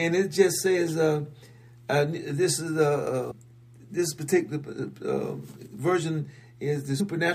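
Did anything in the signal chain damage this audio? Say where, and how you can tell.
Yes. The damage occurred at the codec or storage stage, where compressed frames were skipped. At 3.30 to 3.32 s the audio jumps forward by about 150 ms, and at 7.0 s it jumps by about 70 ms. The jump lengths work out to whole multiples of a 23.2 ms frame, roughly seven frames and then three, which points to missing or rejected frames.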